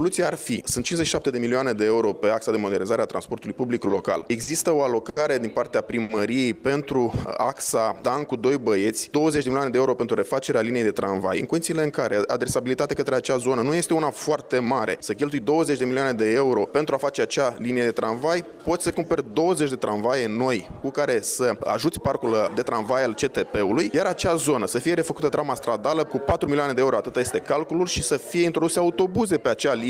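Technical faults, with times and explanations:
3.87–6.11 s, repeated stalls (stutter): the jitter buffer ran dry five times over this span, with packets arriving late or slower than playback. Each time, the receiver stretched the last sound to bridge the wait, about 220 ms filled in total, the longest gap about 70 ms. Nothing is lost, but roughly a tenth of the span is padding, so the audio hitches and drags in short, uneven catches.
6.84–8.62 s, jitter buffer slow-down: with the buffer running short, the receiver rebuilt its reserve by repeating single pitch periods and bits of pauses, adding about 138 ms. Playback runs at about 93% speed with pitch unchanged, so sounds are drawn out.
17.94–19.33 s, jitter buffer slow-down: the same reserve-building happens again, adding about 114 ms at about 92% speed. The sound drags at the same pitch.
10.59–12.97 s, jitter buffer speed-up: the buffer had built up more delay than its target, so the receiver cut short pieces of one or a few pitch periods, about 200 ms in all. 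Playback runs at about 108% speed at the same pitch and sounds hurried.
21.39–22.67 s, jitter buffer speed-up: the same trimming recurs, removing about 100 ms at about 108% speed. The passage sounds briefly rushed.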